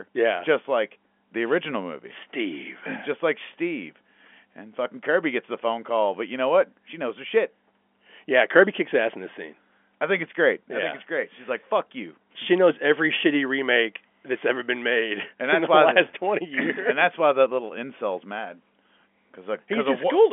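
No technical fault can be heard in this speech recording. It carries the narrow band of G.711 telephone coding, with the line passing roughly 250 Hz to 3.4 kHz and nothing audible above about 3.7 kHz, which fits a 64 kbps mu-law telephone channel.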